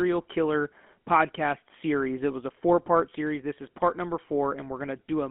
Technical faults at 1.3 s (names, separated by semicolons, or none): GSM full-rate codec